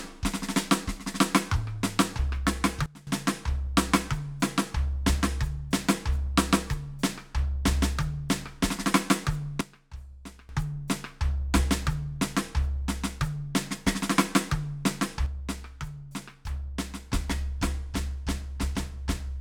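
Sudden gain jumps hit the music at 2.86–3.07 s (down about 19 dB), 9.61–10.49 s (about 16 dB) and from 15.26 s to the end (about 6 dB). The likely cause is gain applied without a ramp, so the background drops along with the music in one step rather than as a gradual fade.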